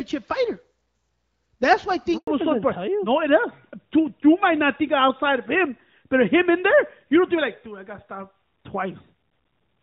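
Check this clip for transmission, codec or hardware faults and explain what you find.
There are two faults, both at about 2.2 seconds.

Handover gap, 2.17 to 2.27 s: the call switched networks, no frames arrived, and the speech drops out for 100 ms before the link resumes.

Fallback to narrowband, from 2.27 s to the end: the call left HD Voice for a narrowband codec, removing everything above 4 kHz, so the speech sounds duller and rougher. Before the switch, the wideband sound fits AMR-WB at around 12.65 kbit/s, with light coding damage.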